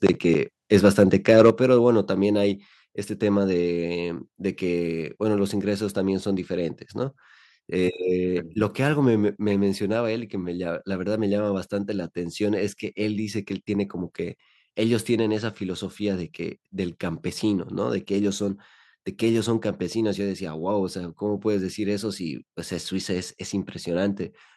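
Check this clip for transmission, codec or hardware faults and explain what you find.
There are two related problems early on, both on the input side rather than in transmission.

Microphone overload shows up from 0.74 to 1.03 s and again from 1.29 to 1.5 s. The loudest moments have a harsh, crackly edge with flattened tops, running about 3 dB and then about 4 dB past the converter's limit. That's likely the mic input being set too hot, so the converter ran out of headroom and chopped the peaks. Well under one percent of samples were clipped in the first burst and a few percent in the second.

The microphone volume gets stepped down twice. At 1.5 s, right as the second distorted stretch ends, the whole sound (speech and background together) drops by about 5 dB in one go, then again by about 3 dB at 2.52 s. These sudden level steps come from the call software reacting to the clipping, likely by pulling the device's input volume down in discrete steps instead of a smooth fade.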